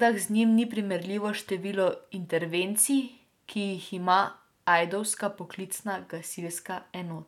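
Nothing in the recording stands out as a technical fault; the speech carries on without any glitch or interruption worth pointing to.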